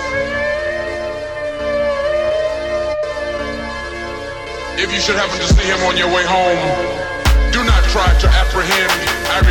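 At 0.68 to 0.71 s the music hits a brief Bluetooth stutter: one late packet, roughly 23 ms, gets covered by replaying the last slice, giving a quick hiccup before playback jumps ahead.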